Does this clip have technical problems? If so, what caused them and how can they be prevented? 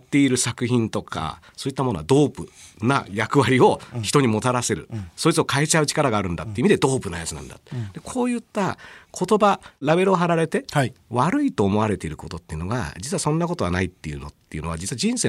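No, this clip has no technical problems, so there is nothing to trace or prevent.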